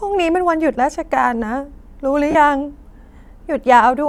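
Brief noisy smears in the speech at 0.74 s and from 2.31 to 2.35 s are lost LE Audio frames, which the LC3 decoder filled by replaying the last spectrum with random signs.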